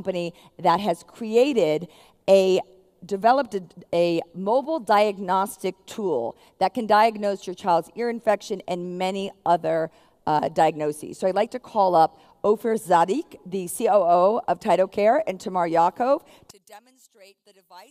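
Right at 16.51 s the sound drops by about 29 dB and stays down to the end, leaving a faint remnant. That's likely one channel inverted: with one side's polarity flipped, everything shared between left and right cancels in the mono sum.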